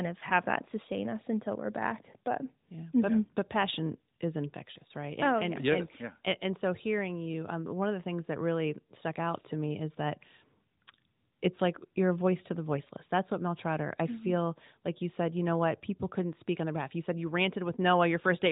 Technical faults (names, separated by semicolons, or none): none